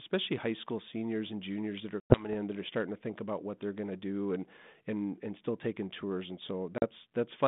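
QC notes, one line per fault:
2.0–2.34 s, packet loss on an ADPCM call: after "and juniors that are" about 100 ms drops to hard-edged silence, likely from a burst of several lost packets. When audio resumes at "that are starting to", the decoder's adaptive predictor and step size no longer match the sender's, so the speech comes back slightly distorted before it resettles.
6.78–6.85 s, packet loss on an ADPCM call: a shorter gap of about 40 ms, with the same abrupt hole and a mistracked recovery. The narrow telephone band of about 150 Hz to 3.6 kHz fits 32 kbit/s G.726.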